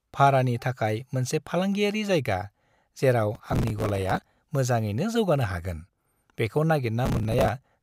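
A gritty, tearing crackle rides on the speech from 3.35 to 4.22 s and again from 7.06 to 7.49 s. This is processor overload crackle: the processor repeatedly missed deadlines for short buffers, which sounds like buffers of around 5 ms, replaying stale audio with hard edges each time.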